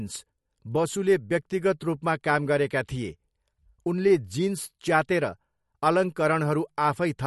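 Throughout, likely MP3 compression at a low bitrate, around 48 kbps, starves the encoder: treble stops near 11.9 kHz, leaving speech watery with smeared attacks.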